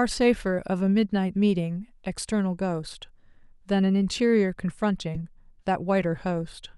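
At 5.15 s a brief chirp-like blip of noise cuts through the speech: a corrupt frame decoded, where damaged bits across a few frames placed energy at wrong frequencies, peaking around -20 dBFS.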